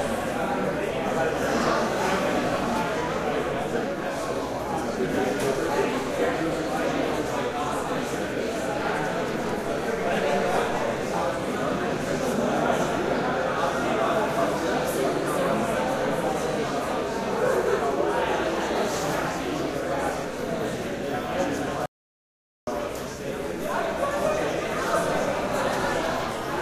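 A recording of sounds with an audio dropout to silence from 21.86 to 22.67 s. For about 0.81 s the sound cuts out completely, with no background noise at all. The input was likely lost, so only silence was written. Whatever sounded then is gone.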